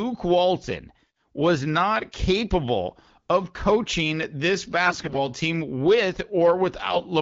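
From 4.86 to 5.28 s the speech turns hoarse and gargly, with a scratchy rasp over it, though its pitch and loudness roughly hold. A shorter, milder patch follows from 6.90 to 7.03 s. These are AMR bit errors: weakly protected bits in the coded frames arrived corrupted, so pulses and fine pitch, gain and spectral values decoded wrongly. The first burst sounds heavier, consistent with roughly one bit in five flipped, against about one in ten later.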